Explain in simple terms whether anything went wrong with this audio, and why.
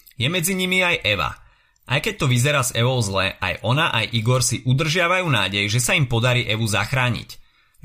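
Nothing went wrong here: the speech comes through steadily, with no technical problems to be heard anywhere in the recording.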